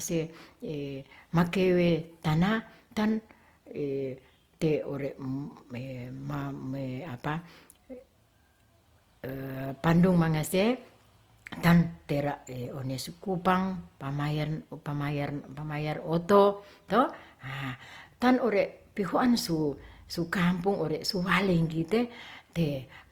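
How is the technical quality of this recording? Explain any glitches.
The recording is plainly degraded by lossy compression across its full length. From start to finish the speech sounds rough and grainy, with a noisy texture where there should be clean detail. The likely cause is Opus compression in its music (CELT) mode at a low rate, which fits about 24 kbps. Short of bits, the encoder keeps each band's energy but fills its contents with noise or folded copies of lower bands. Bandwidth stays full, with content reaching about 20.2 kHz.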